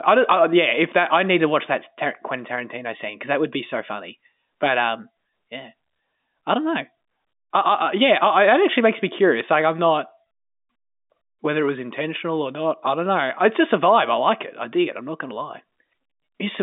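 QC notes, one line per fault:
Nothing stood out on listening, with the speech carried over a G.711 telephone line that passes nothing above about 3.7 kHz.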